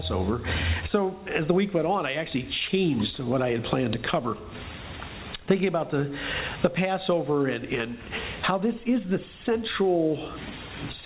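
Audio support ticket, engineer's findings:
Nothing stood out on listening; the sound tops out around 4 kHz, as expected of a narrowband call path.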